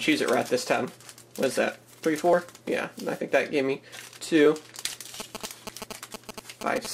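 A nearby 2G phone exchanging signalling bursts with its network is being picked up and rectified by the audio circuitry, producing GSM signalling bursts from 5.2 s to 6.87 s. The radio bursts repeat at 216.7 Hz, so the interference comes through as a galloping dit-dit-dit of short buzzes at that rate, sitting roughly 10 dB below the wanted sound and continuing almost to the end of the clip.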